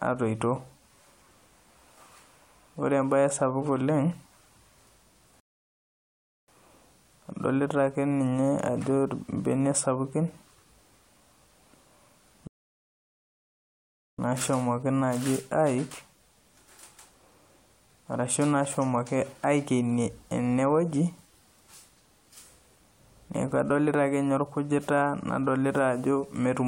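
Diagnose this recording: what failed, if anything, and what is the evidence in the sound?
Playback failed with two rebuffering stalls. The speech drops to silence from 5.40 to 6.48 s and again from 12.47 to 14.19 s, adding 1.08 s and 1.71 s. Each time it resumes exactly where it stopped. The player ran dry, waited for data, then continued.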